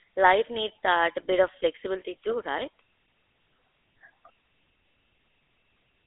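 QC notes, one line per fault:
Throughout, GSM full-rate codec: the speech carries a plainly audible buzzy, gravelly roughness because the codec rebuilds the voice from a vocal-tract model excited by a sparse, regularly spaced pulse train rather than the real waveform. The character fits the 13 kbps full-rate coder. The line band runs from about 300 Hz to 3.6 kHz, and nothing is heard above 3.8 kHz, so sibilants and breath detail are lost and the voice sounds dull and boxy.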